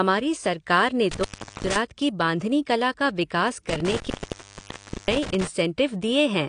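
Throughout, nothing reaches above 9.9 kHz and the speech sounds dull and smeared, with plainly audible codec damage, likely from AAC compression at a low bitrate around 32 kbps. An intermittent contact breaks the line from 1.11 to 1.76 s, after "सरकार ने" and before "की बांधनी कला का", opening for about 397 ms, and again from 3.69 to 5.47 s after "बांधनी कला का विकास", opening for about 981 ms. Each time the sound drops out with crackle at the edges.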